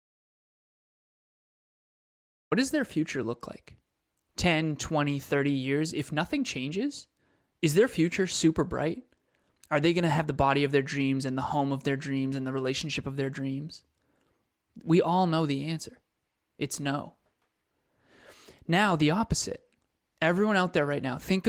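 The clip opens in dead silence: from the very start until about 2.52 s there is nothing at all, not even room tone, because the dropout is already under way when the audio begins. That flat silence is the signature of an audio dropout to silence, most likely from the input being lost for a moment while the recorder kept writing empty samples. The speech then arrives abruptly, and whatever came before it is simply gone. Past that point the Opus compression at 24 kbps leaves only light codec colouring on the voice.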